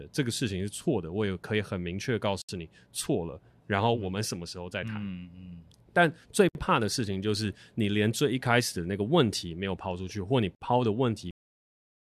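Gaps at the joins of encoded pieces appear at 2.42 to 2.49 s, 6.49 to 6.55 s and 10.55 to 10.61 s, roughly every 4 s. Each join leaves a gap of about 64 to 69 ms where untrimmed encoder start delay and last-frame padding remain. The speech breaks, with smeared edges, then resumes exactly where it left off.

A cut-off end follows at 11.31 s. The final stretch of audio was never written out or played, so the speech stops mid-sound and falls straight to digital silence with no natural decay.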